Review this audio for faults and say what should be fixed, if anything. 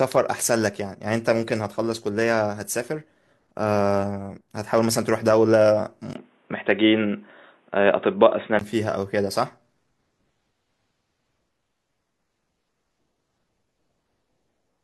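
From 6.13 s to 8.61 s the speech turns abruptly dull and boxy, with nothing above 3.8 kHz, a brief dropout of about 20 ms at the changeover, a level shift of roughly 5 dB, and a different, faint background noise sitting well below the speech. Full bandwidth returns at 8.61 s. This is likely an input switched to a poorer device, such as another microphone or a headset's call profile, whose narrower band, tone and noise floor replace the original path for those seconds. To prevent it, lock the recording input to one device and disable automatic switching to headset or call profiles during capture.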